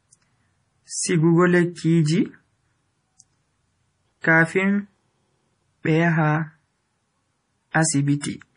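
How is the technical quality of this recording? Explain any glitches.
The technical quality is poor. Heavy MP3 compression colours the whole clip, from start to finish. Nothing is present above 10.5 kHz, so the speech sounds dull and lacks air. The sound is watery and swirly. Sibilants carry a metallic chirp, and consonant attacks smear. The likely cause is an encoder starved of bits, which fits a bitrate around 32 kbps. It cuts the treble at a fixed point. It also drops weak frequency lines that flicker on and off between frames.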